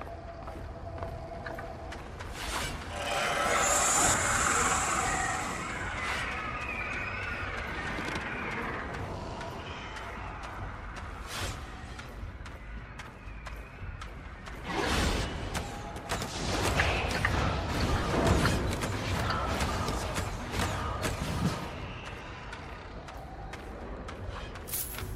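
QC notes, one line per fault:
17.94–18.06 s, lost LE Audio frames: short dropouts scattered across about 120 ms, about 70 ms of it missing in runs of up to around 20 ms, which fits several 10 ms frames going missing. The LC3 decoder covers each gap by replaying the last spectrum with random signs, so the sound turns into a brief noisy smear.
23.41 s, lost LE Audio frames: one tiny concealed gap, consistent with a single lost 10 ms frame, heard as a momentary smear.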